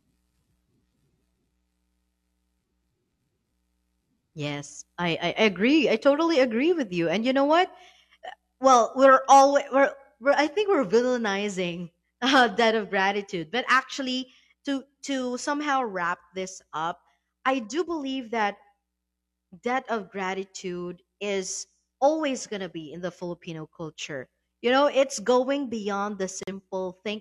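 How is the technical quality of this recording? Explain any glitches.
One glitch stands out, near the end of the speech. At 26.43 to 26.53 s, a corrupt frame is muted. The decoder rejected one damaged frame and silence filled its place, leaving an abrupt 94 ms gap that appears as a flat waveform and a blank spectrogram column.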